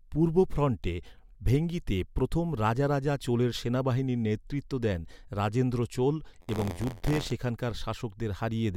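From 6.40 to 7.32 s, the playback ring buffer's writer and reader slip and cross each period. A small slice of every buffer replays sound about 40 ms old, between hard joins. This buffer tearing puts a robotic 86.1 Hz buzz on the speech, which fits a 512-sample buffer.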